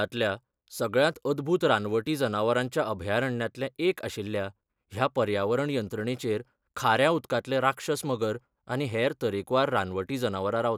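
No dropouts, glitches, distortion or level problems are audible anywhere in the recording.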